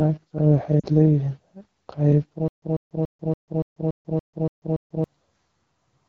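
Throughout, the AMR wideband (HD Voice) codec is plainly audible as a rough, raspy edge, unlike smooth band-limiting, which fits one of its lowest rates, around 8.85 kbit/s. From 0.80 to 0.86 s, lost AMR speech frames cause a 40 ms dip and warble, consistent with two frames rebuilt from earlier settings. This is a smeared fade rather than a hard cut. From 2.48 to 5.04 s, a stutter with silent gaps repeats a 144 ms fragment every 285 ms with about 142 ms of digital silence between, most likely from a stalled player or stream. The exact repeats and dead gaps set it apart from concealment fading.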